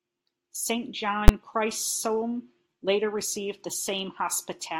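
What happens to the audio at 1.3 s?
At 1.28 s the speech is hit by invalid numbers at full scale. A calculation produced infinite or invalid values that clamped to the maximum level for about 11 ms, which fits a 512-sample block. It sounds like one sharp bang. The waveform shows a flat slab held at one extreme value far beyond the speech peaks, and the spectrogram shows a bright vertical stripe across all frequencies.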